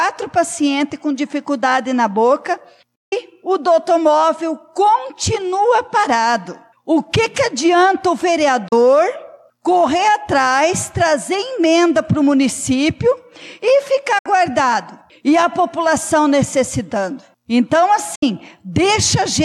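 Digital broadcast dropouts at 2.95–3.13, 8.68–8.73, 14.18–14.26 and 18.15–18.23 s: the receiver muted, with fast 8 ms fades, on corrupted frames. The programme sent during those gaps is lost.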